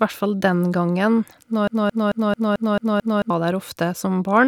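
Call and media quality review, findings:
Broken-record loop, 1.68–3.30 s: a 0.22 s speech fragment repeats back to back seven times, and the intervening audio is lost. Likely a stalled player or stream resending its last buffer. Spectrogram shows identical blocks tiling at 0.22 s intervals.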